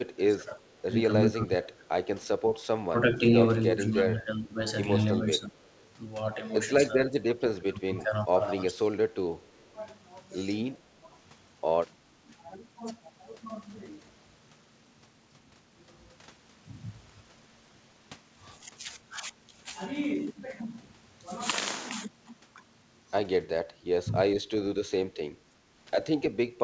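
This speech clip, which carries nothing above 8 kHz through its call path, shows an echo canceller that likely could not tell its own talker apart from loudspeaker echo while both sides spoke, so it turned everything down. That speech suppressed in double talk runs from 0.03 to 12.32 s, with around five seconds of it audibly affected: the speech dips by as much as roughly 20 dB, losing its top end or dropping out in patches. The same ducking returns from 24.06 s to the end of the clip. Alongside this, the far end's canceller likely let some of its microphone pickup slip back into the call, and that echo leak appears as brief, faint, delayed copies of the speech arriving about 0.34 s late. These come at 0.65 to 0.69 s, 5.62 to 5.9 s and 9.44 to 9.49 s. They sit far beneath the direct speech, around 35 to 40 dB down.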